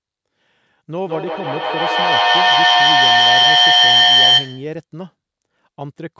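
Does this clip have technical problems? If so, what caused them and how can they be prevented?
Yes, there's a feedback howl from 0.97 to 4.85 s. It builds near 3 kHz, repeating about every 150 ms and peaking about 14 dB above the speech. Two devices in the same room on one call keep re-amplifying each other. Muting one device or using headphones keeps the loop from closing.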